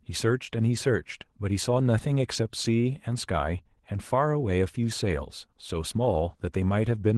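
No technical faults can be heard in this recording.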